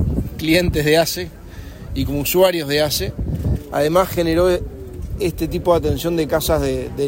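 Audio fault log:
Nothing in this one stands out as a fault, so there's nothing to log here.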